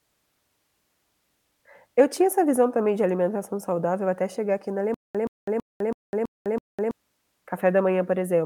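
At 4.94 s, right after "até chegar aqui na", the speech breaks into a stutter with silent gaps that lasts until 6.91 s. A 125 ms fragment repeats six times, each followed by about 203 ms of digital silence, giving a steady 328 ms cycle. This is likely a stalled player or stream replaying its last buffered piece at each retry. The speech that belonged in that span is lost. On a waveform, identical blocks alternate with flat silent stretches. A spectrogram shows repeated copies separated by blank columns.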